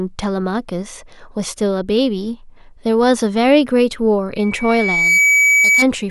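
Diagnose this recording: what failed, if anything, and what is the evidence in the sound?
Loudspeaker feedback squeal from 4.37 s to 5.88 s, arising in the acoustic and analogue stage rather than in any digital processing. A single tone at 2.3 kHz emerges from the speech and swells over roughly three-quarters of a second until it sits a few decibels above the talker, then holds until the end of the event. The microphone is hearing its own loudspeaker, and at 2.3 kHz the loop gain exceeds one, so that frequency keeps reinforcing itself.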